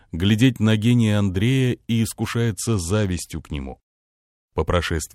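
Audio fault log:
2.54–3.83 s, Bluetooth SBC bit pool drop: the wireless link came under pressure and the sending device cut the SBC encoder's bit allowance for about 1.3 s. The sound fits a fall from a bit pool near 28 to one near 11, roughly 90 kbps. Starved of bits, the highest sub-bands get little or nothing, so the treble goes dull. The remaining bands are coarsely quantised, adding a gritty noise until the rate recovers at 3.83 s.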